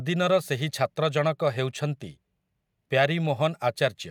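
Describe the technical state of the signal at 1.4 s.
At 1.4 s the signal is intact, with no audible fault at that moment.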